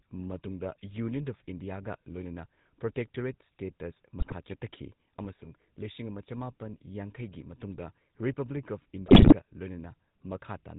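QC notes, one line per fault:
Throughout: GSM full-rate codec at 13 kbps. A pulse-excited vocal-tract model with nothing above 4 kHz gives the speech a plainly audible buzzy, gravelly roughness.
4.20–4.35 s: GSM bit errors, after "ꯏꯟꯗꯤꯌꯥꯒ ꯂꯣꯏꯅꯅ ꯄ꯭ꯔꯣꯇꯦꯛꯇꯣꯔꯦꯠ ꯁ꯭ꯇꯦꯇꯁ" and before "ꯆꯠꯊꯈꯤ ꯑꯃꯁꯨꯡ ꯂꯤꯁꯤꯡ ꯑꯃ". Corrupted filter, pitch and gain values break the speech into squawks and gargling.
9.06–9.33 s: GSM bit errors, after "ꯌꯥꯡꯈꯩꯒꯤ ꯃꯇꯨꯡꯗ ꯔꯤꯄꯕ꯭ꯂꯤꯛ ꯑꯣꯐ". A longer, denser burst of flipped bits distorts the spectrum and level frame by frame, giving pops and gargling.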